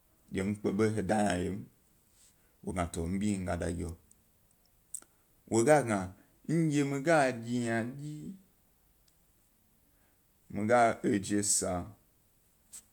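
No technical faults occur at any point in the recording.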